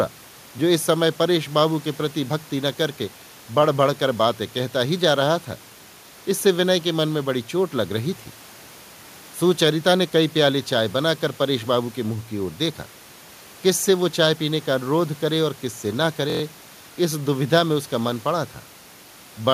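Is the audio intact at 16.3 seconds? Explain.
No. From 16.30 to 16.42 s a system hang loop occurs: the driver stalled while the hardware replayed one 23.2 ms buffer (fitting 1024 samples) five times, giving a brief 43 Hz buzz. The waveform shows identical repeated blocks, and a spectrogram shows evenly spaced vertical stripes.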